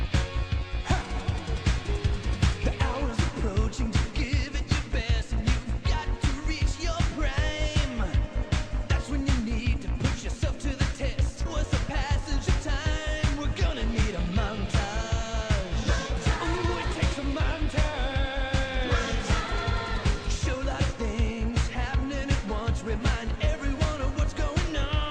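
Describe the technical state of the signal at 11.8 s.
At 11.8 s the signal is inside a jitter buffer speed-up running from 11.58 to 14.20 s. The receiver's buffer had built up more audio than its target, so it trimmed short segments of one or a few pitch periods, repeatedly, shedding roughly 40 ms over the span. Playback runs at about 101% speed with unchanged pitch.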